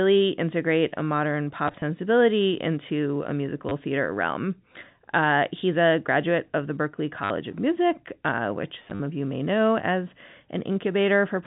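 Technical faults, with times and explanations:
1.68–1.82 s, 3.69–3.71 s, 7.24–7.30 s and 8.84–9.00 s: packet loss with the last packet repeated. Audio packets went missing, about 60, 20, 60 and 90 ms' worth, scattered at the first and last spots, and the receiver filled each gap by replaying the previous packet. The replays seldom align with the pitch, and the longer runs buzz at a rate that fits 10 ms packets, heard over the narrow G.711 telephone band as a brief robotic stutter.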